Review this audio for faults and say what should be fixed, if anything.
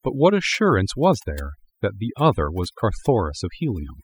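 Overdone noise removal runs through the whole clip. The background drops away, broken by twinkling specks. The noise reduction was set too aggressively. It cut individual frequency bands hard whenever they came close to its noise estimate. Quiet parts of the speech fell below that line and were removed with the noise. To prevent this, use gentler reduction settings and keep some natural background.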